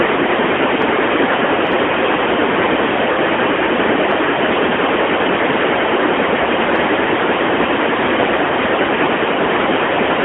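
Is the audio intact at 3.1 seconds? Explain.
No. Between about 3.12 and 3.16 s there's a brief dip and warble, which sounds like lost AMR speech frames, probably just one 20 ms frame. The decoder papered over the gap by reusing the last good pitch and vocal-tract settings at a reduced gain before the real signal picked up again.

That moment also carries the AMR narrowband mobile codec running through the whole clip. Everything sits within roughly 250 Hz to 3.4 kHz, and the voice has that plainly buzzy, synthetic edge, which fits a mid-rate mode around 10.2 kbps.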